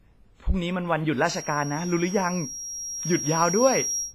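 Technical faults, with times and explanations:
Throughout, WMA compression: the speech has a ringing, washy quality with hiss that swells and sinks along with the signal, and no content above 15.5 kHz, likely from a low-bitrate transform encoder (the damage is heavy, which fits about 24 kbps) smearing quantisation noise across long blocks, unlike brief pre-echo or clicks.
1.18 s to end, feedback whistle: a thin, steady tone at 5.6 kHz sits behind the speech, roughly 10 dB below it, slowly swelling and fading, likely a speaker-to-microphone loop held just short of feedback; it never builds into a howl, which separates it from full feedback.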